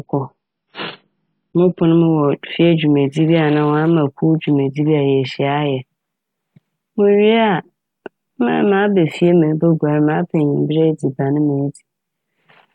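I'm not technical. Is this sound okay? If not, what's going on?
No. For the first 2 seconds, the speech sounds dull and muffled, with nothing above 5.5 kHz. At 2.0 s it suddenly becomes clearer and brighter, without any gap. This is an adaptive stream starting at a low bitrate. The player began with a small, rough version of the audio so it could start quickly. Once it had checked the connection, it switched to a better version.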